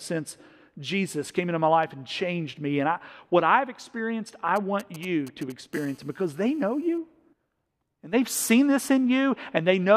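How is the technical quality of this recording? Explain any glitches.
The recording is disturbed by interference from a nearby 2G mobile phone, heard in two separate stretches.

GSM signalling bursts, 4.56 to 5.52 s, right after "what I've experienced I": a phone handling network signalling sends short groups of radio bursts, which the audio circuit rectifies. The result is a galloping dit-dit-dit of ticks and brief 217 Hz buzzes, around 20 dB below the speech.

GSM phone buzz, 5.73 to 6.98 s: the phone is now in a call, transmitting bursts steadily 217 times a second, and the rectified pulses leak into the audio. This produces a continuous, hard, raspy 217 Hz buzz rich in harmonics and unrelated to the speech, about 31 dB below it.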